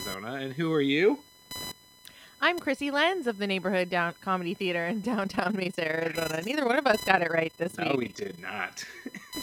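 Computer activity noise runs from the start to the end of the speech, a buzzing, chirping layer pulsing at around 1 kHz and sitting some 20 dB below the voice. It comes from the computer itself. Shifts in processor, graphics or mouse load push current through a ground shared with the audio circuitry, so the interference rises and falls with the machine's workload rather than with anything in the speech.

Overlap-add ripple appears from 5.24 s to 8.43 s, where the speech takes on a rapid, rough tremolo. The audio was split into overlapping windowed frames and rejoined, but the overlapping windows did not add up to a steady gain. Level therefore swings by about 11 dB once per frame, around 30 times a second, and that periodic dip and swell is heard as a fast flutter over the voice.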